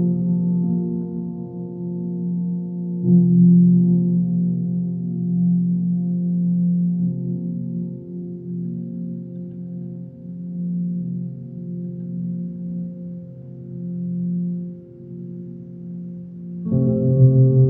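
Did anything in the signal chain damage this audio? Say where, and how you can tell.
Yes: throughout, the sound plays at half speed and an octave low, a sign of stereo read as mono when sample formats were converted, with interleaved left and right samples run together as one channel.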